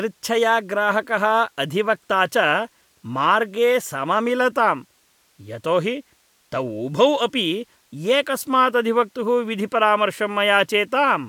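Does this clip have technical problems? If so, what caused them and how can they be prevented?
No, no technical faults can be heard anywhere in this speech clip. There is nothing here that needs preventing.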